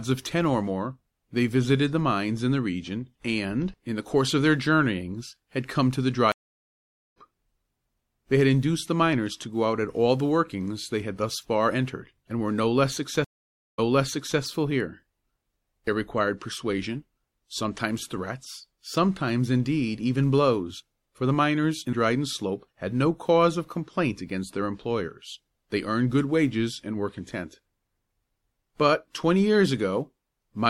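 At 6.32 s there's a stream reconnect. The connection drops, about 0.84 s of silence follows, and the fresh decoder picks up around 0.7 s further on, so a stretch of audio is skipped. At 13.24 s another one hits with 0.54 s of silence, but this time the server's resent burst lands it 0.63 s earlier, so you hear a short bit repeat.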